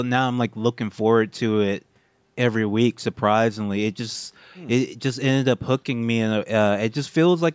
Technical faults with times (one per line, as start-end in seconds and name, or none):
none